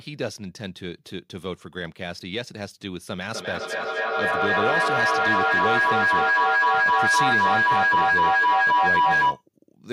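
Feedback howl takes over this speech clip from 3.29 s to 9.45 s. A microphone is picking up a loudspeaker carrying the same call, and each pass around that loop adds level, so the sound swells rather than dying away and narrows to a tone near 1 kHz. It pulses roughly every third of a second, the loop's round-trip delay, and peaks about 10 dB above the speech before it stops.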